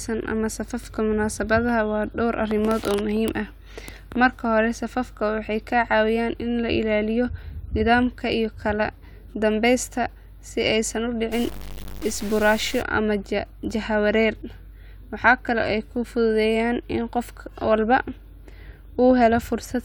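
Speech, with a stretch of low bit depth without dither from 11.32 to 12.82 s: the audio turns grainy and gritty, the distortion shifting with the signal and quiet parts sputtering or dropping out. This is likely truncation to about 6 bits, with error around 15 dB below the signal.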